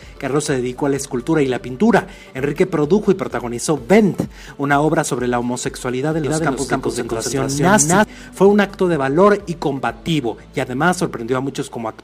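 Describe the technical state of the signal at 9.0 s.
Nothing at 9.0 s points to a fault; the signal is intact at that moment.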